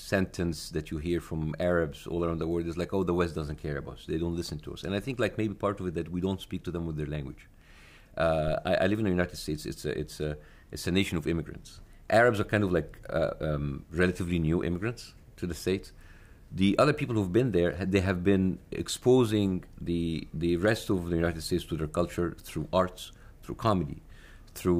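A short, deep thump at 8.48 to 8.53 s, peaking around -26 dBFS and dying away within about 12 ms, is a phantom power thump from a supply switching on a live input.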